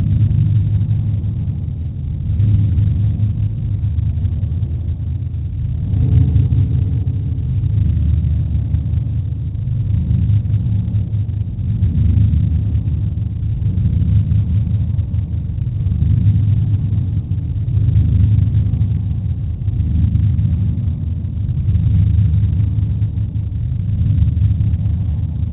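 At 1.85 s there is a single sharp click, a thin vertical line across the whole spectrum. It is most likely dropped samples: a fraction of a millisecond of the stream went missing, so the waveform jumps straight to a later value. Unlike a dropout or gap, no sound is audibly removed and nothing stutters. It is one isolated tick. The band-limited background from the G.711 call path, with nothing above 4 kHz, continues unbroken around it.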